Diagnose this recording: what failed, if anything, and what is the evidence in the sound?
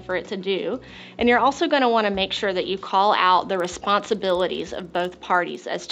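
Sample-rate conversion failed with the resampler restarted on every block: from 3.45 s to the end, a 20 Hz tick rides the signal, fitting 50 ms blocks upsampled from 16 kHz to 48 kHz.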